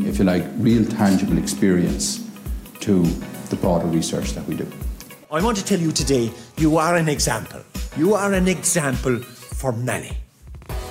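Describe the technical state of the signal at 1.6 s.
At 1.6 s the signal is intact, with no dropout, distortion, glitch or other technical fault audible at that point.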